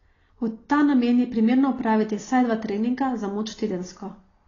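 From the first moment to the end, the speech carries plainly audible damage. Nothing sounds above about 7.1 kHz, so the top is cut away and the sound is dull. Sibilants turn fizzy and smeared, and sustained sounds warble. This is likely AAC compression, in its AAC-LC form. The coder has too few bits for each frame. It drops the highest band and quantises what remains coarsely. The damage fits a low bitrate near 24 kbps.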